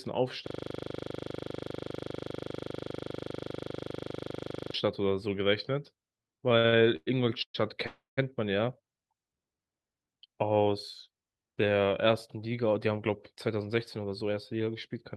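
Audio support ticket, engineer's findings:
System hang loop, 0.47 to 4.74 s. A 40 ms slice of speech repeats exactly, 107 times, giving a steady 25 Hz buzz. Driver or host froze while the audio hardware kept cycling its ring buffer, which fits a 40 ms buffer.

Repeated stalls (stutter), 6.49 to 7.56 s. Five gaps filled with continued sound, 348 ms in total. The longest is 117 ms. Concealment covers about a third of the span. Jitter buffer kept running dry on late packets. Nothing lost, but speech drags.

Call audio freeze, 7.86 to 8.19 s. Sound holds and fades for 312 ms, with 160 ms of that silent. Speech then resumes where it stopped, with nothing skipped. Likely cause is delayed packets emptying the jitter buffer, adding 312 ms of delay.

Jitter buffer speed-up, 12.78 s to the end. Speech runs at 109% speed with pitch unchanged and sounds hurried. Receiver trimmed short pitch-period chunks, roughly a fifth of a second in all, to shed excess buffered delay.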